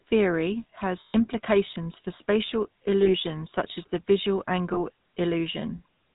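GSM full-rate codec damage runs throughout: the vocal-tract model is driven by sparse regular pulses with nothing above 4 kHz, giving the speech a buzzy, gravelly roughness consistent with 13 kbps full-rate coding. Lost GSM frames follow at 1.0–1.15 s just before "implications for spatial", at 3.02–3.12 s between "implications for spatial" and "such as the visual", and at 4.74–4.77 s just after "such as the visual". Each time, the last good frame is repeated, so the sound hangs as a brief rough, metallic ring.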